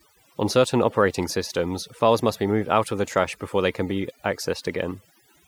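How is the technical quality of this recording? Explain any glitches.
The recording is compromised by overdone noise removal that runs through the whole clip. Between phrases the background drops to an unnatural near silence dotted with twinkling specks. A noise reduction stage was pushed too hard: it pulls down or mutes individual frequency bands whenever their level sits close to its noise estimate, so the quieter parts of the speech are stripped away along with the noise.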